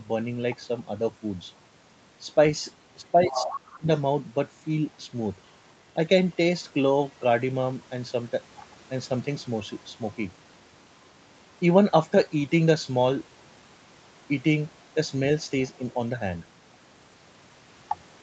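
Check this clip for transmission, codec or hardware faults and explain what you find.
Two linked echo-cancellation faults occur together around 3 s. The audio is band-limited to 8 kHz, consistent with the Opus call path.

Speech suppressed in double talk, 3.05 to 3.88 s: with both sides talking, the echo canceller likely mistook the talker for echo, dipping speech by up to about 25 dB, in pieces totalling roughly half a second.

Other side's voice leaking through, 3.25 to 3.53 s and 3.72 to 3.78 s: residual loudspeaker echo likely escaped cancellation, first only about 5 dB below the talker, then as a faint scrap about 25 dB down.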